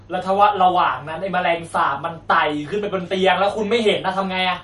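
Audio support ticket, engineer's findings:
MP3 compression throughout the speech: watery, swirling texture, sibilants metallic and smeared. Likely a low-bitrate MP3 encode, plainly audible damage fitting about 48 kbps. Starved bit budget drops highs and flickers weak spectral lines frame to frame.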